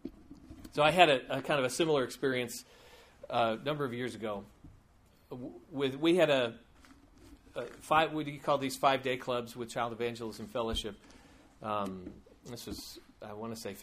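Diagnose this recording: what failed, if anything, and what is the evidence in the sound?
No stage in the chain, from capture and conversion through to playback, shows audible evidence of failure, and the signal holds continuous and stable throughout.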